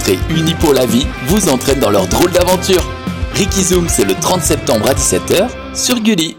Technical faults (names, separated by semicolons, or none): integer overflow